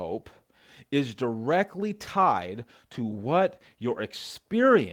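No technical faults are audible anywhere in the speech, so there is nothing to log.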